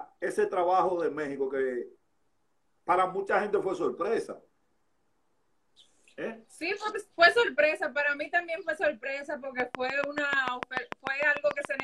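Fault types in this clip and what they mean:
Train of clicks: from 9.6 to 11.81 s, about fifteen near-identical pulses tick over the sound at a steady 6.8 per second, standing roughly 20 dB above it, likely from interference by nearby equipment or a faulty connection or power supply injecting repeated spikes.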